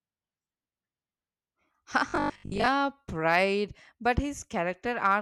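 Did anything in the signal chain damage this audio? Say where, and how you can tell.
Yes. From 2.10 to 2.68 s the speech turns into a rigid, metallic buzz with robotic sound from repeated short buffers. A fixed pitch of 50 Hz sits over the speech, which still roughly follows the original. The damage is at the driver or buffer stage. The likely cause is audio arriving too seldom, so the same 20 ms buffer is replayed in place of most of the real signal. That repetition sets the 50 Hz pitch.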